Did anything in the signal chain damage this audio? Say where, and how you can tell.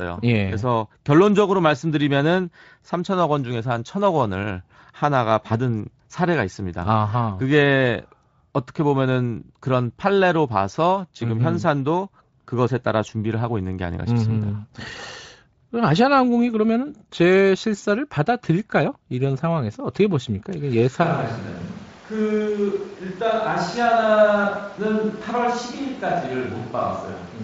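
Yes, at capture. From 21.05 s to the end, speech turns suddenly roomy, hollow and about 5 dB quieter, likely a switch to a distant microphone.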